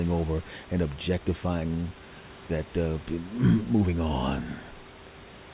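No technical faults can be heard in the speech. The room noise sits about 19 dB below the voice, and the call path leaves nothing above 4 kHz, which fits a G.711 A-law narrowband connection.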